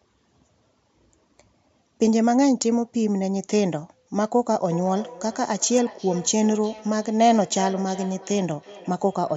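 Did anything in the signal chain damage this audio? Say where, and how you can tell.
Yes. From 4.7 s to the end, the audio carries a feedback echo between two devices. It is an acoustic loop across the call path: each phrase returns roughly every 400 ms, peaking at about 16 dB below the speech and growing thinner and more ringing with each pass. A single-device echo would be removed by that device's own canceller, and room reverb would not repeat at a fixed spacing, so a second device in the room is replaying this microphone's sound.

At 5.77 s and 6.79 s there are two isolated sharp clicks, each a thin vertical line across the spectrum. They are most likely dropped samples at the driver or buffer stage, with only a couple of samples missing so the waveform jumps. Packet loss would leave an audible gap, but here no sound goes missing.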